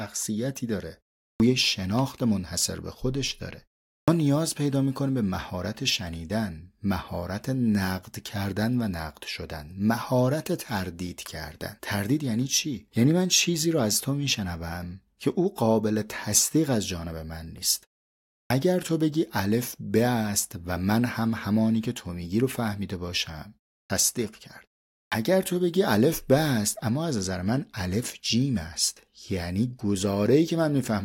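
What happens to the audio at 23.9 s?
Clipped start after a pause, 23.86 to 23.90 s: the output device is slow to wake after 0.35 s of silence, swallowing 38.5 ms, so speech begins abruptly.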